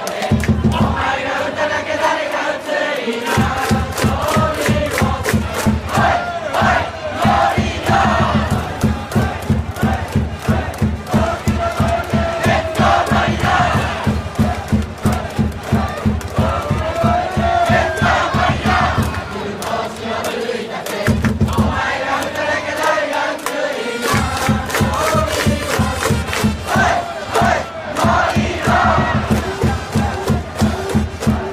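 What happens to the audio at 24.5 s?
Nothing goes wrong at 24.5 s; the audio there plays through cleanly, with no dropout, click, distortion or other fault.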